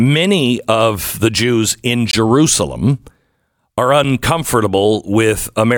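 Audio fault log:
2.11–2.13 s and 4.04 s, block of digital silence: the audio drops to zeros for 21 ms, then 5 ms, giving a brief hole and then a tick, from an unfilled buffer or invalid numbers.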